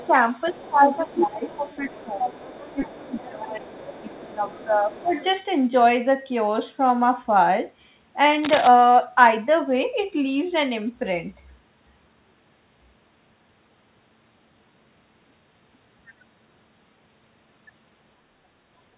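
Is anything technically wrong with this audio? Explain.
Yes, there are a few problems, all in the first five seconds or so, plus one scratchy moment later.

Other side's voice leaking through: a second voice sits under the speech from 0.00 to 0.09 s, again from 0.46 to 4.21 s, and from 4.52 to 5.24 s. It's quiet, roughly 20 to 25 dB below the main talker. The likely cause is the far end playing through a loudspeaker, with the echo canceller not scrubbing all of it off the mic, so you get this faint ghost conversation underneath.

Speech suppressed in double talk: over the same stretch the main speech keeps ducking, briefly at 0.08 to 0.13 s and then for much longer from 0.51 to 2.29 s and 2.71 to 5.14 s. The short dip is only a few dB, but the long ones go down about 15 dB, and the talker sounds pushed back and patchy for a second or two at a time. This is likely the canceller seeing both sides talking at once, failing to separate them and turning the whole lot down.

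Cable scratch noise: from 8.43 to 8.68 s there's a dense, ragged burst of scratching laid over the audio, only a little below the speech level, so it really stands out. It's likely a worn cable, connector or control being moved, with its contact resistance jumping around and spitting noise into the line. The band limit at 4 kHz fits a normal G.711 call path and isn't part of the problem.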